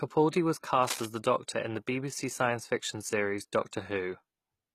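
From start to end, the speech carries what is likely HE-AAC compression. The damage is plainly audible. The coder keeps only the lower spectrum and rebuilds the treble by copying lower bands upward under a coarse envelope. That rebuilt treble is not the original, so its harmonics do not line up with those below. Nothing remains above 14.9 kHz. The sound fits a low bitrate of around 20 kbps.

From 0.82 to 1.06 s comes cable scratch noise. Dense, uneven bursts of noise sit over the speech, heard as scratching or rustling. They run at roughly 5 dB below the speech. The likely cause is a worn cable, connector or control carrying a DC voltage being moved. Its contact resistance then changes rapidly, and the noise enters the signal for that moment.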